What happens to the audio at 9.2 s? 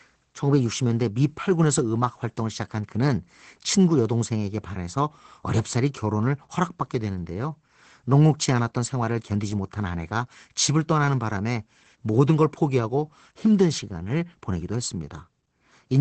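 At 9.2 s the speech carries Opus voice compression, as it does throughout the clip. The SILK predictive coder keeps only a wideband signal, so nothing is heard above 8.8 kHz. Its coarse excitation makes the speech sound muffled, hoarse and slightly robotic, which fits a stream of about 12 kbps.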